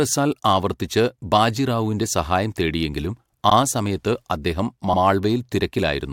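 Repeated frames at 3.49 to 3.54 s, just after "ബാജി റാവുവിൻ്റെ സഹായം തേടിയെങ്കിലും" and before "ആ സമയത്ത് അദ്ദേഹം": a 52 ms block of speech is played once more, heard as a brief stutter. This fits a couple of compressed frames being written or sent twice, and it lengthens the audio by 52 ms.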